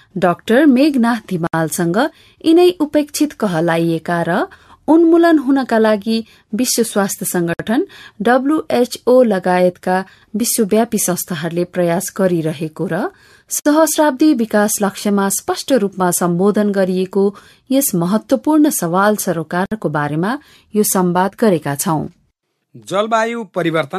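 Gaps at joins of encoded pieces fall at 1.47 to 1.53 s (66 ms), 7.53 to 7.60 s, 13.60 to 13.66 s and 19.66 to 19.72 s (60 ms each), repeating every 6 s. The speech seems to have been encoded in separate chunks and joined without trimming, so each join keeps a chunk's padded final frame and the next chunk's encoder start-up silence. Each gap is a sudden hole in the speech with smeared edges, after which the sound resumes where it stopped.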